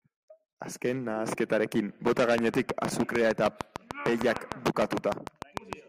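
A train of clicks runs from 2.38 s to 5.74 s: roughly twenty sharp, near-identical pulses arriving at a steady 6.6 per second, each peaking around 15 dB above the speech. The even spacing and repeated shape point to something outside the recording injecting a pulse at a fixed rate, likely electrical interference from nearby equipment or a faulty connection or power supply. It sounds like a regular ticking laid over the speech, heard in the gaps between phrases too.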